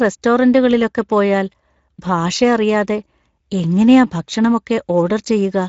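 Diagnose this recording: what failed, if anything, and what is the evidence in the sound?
Speex codec damage runs throughout the speech at the codec stage: a coarse, noisy CELP texture, nothing above 7.7 kHz, and sparse excitation that points to roughly 17 kbps.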